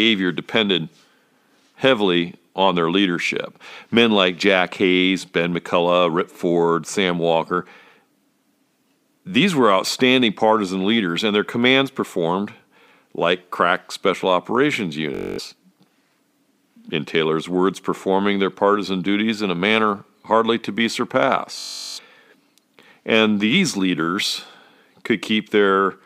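Right after "like crack special operations", at 15.15 s, Bluetooth stutter breaks up the speech until 15.40 s, and again from 21.59 to 21.99 s. Packets failed to arrive in time, so the receiver kept replaying its last short slice, producing a buzzy machine-gun repeat. Speech resumes about 0.23 s and 0.38 s further on, with that stretch simply missing. A spectrogram shows identical narrow columns tiling each gap, and the waveform a repeating block pattern.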